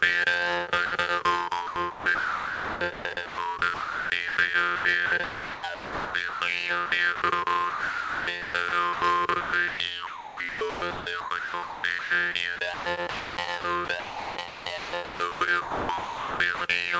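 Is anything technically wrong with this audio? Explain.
Yes. At 0.86 to 0.92 s, a 60 ms stretch of sound gives way to steady synthetic noise before the audio resumes. This is sound dropped by the voice detector. The sending side's detector likely misjudged that moment as background and stopped transmitting, so the receiver filled the gap with comfort noise until the detector triggered again. The sound, band-limited to nothing above 8 kHz as the call path delivers it, simply blinks out for that instant.

From 1.67 s onward the audio turns choppy. The affected stretches run 1.67 to 3.38 s, 3.74 to 4.37 s, 4.76 to 6.41 s, 6.86 to 7.22 s, 7.70 to 9.02 s, 9.41 to 9.80 s, and 10.07 to 16.61 s. Within them, pieces of sound repeatedly vanish. The longest stretch loses about 3.5 s in total. This is sound chopped by the voice detector, most likely caused by the detector toggling between sending and muting, with comfort noise patched into each muted gap.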